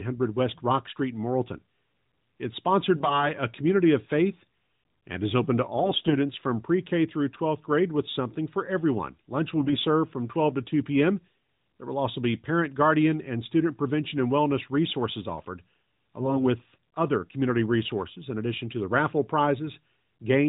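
Four short bursts of AMR bit errors roughen the speech: 2.96 to 3.33 s, just before "a community of faith"; 5.78 to 6.17 s, between "and is open to" and "from pre"; 9.57 to 9.82 s; and 16.20 to 16.44 s, between "and wellness resources offered" and "with other community resources". A weak link flipped a few percent of the loosely protected bits in the narrowband mobile frames, misplacing excitation pulses and skewing fine gain and spectral values. Pitch and loudness hold while the voice turns hoarse and gargly. Unlike dropouts or concealment, nothing falls silent or repeats.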